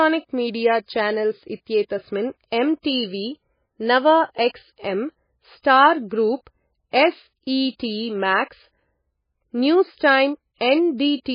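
From the start to the end of the speech, nothing comes through above 5 kHz, and the sound has a watery, swirly quality with smeared attacks and chirpy s sounds. That's likely heavy MP3 compression, starved of bits in a way that fits roughly 17 kbps.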